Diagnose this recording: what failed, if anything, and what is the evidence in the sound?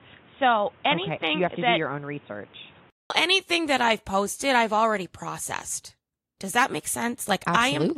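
Input likely switched to a poorer device at driver level: the spectrogram is empty above 3.8 kHz until 3.10 s, then a 0.2 s gap precedes full-band "anything that I've posted".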